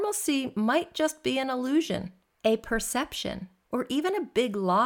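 Speech recording, and nothing is technically wrong with it.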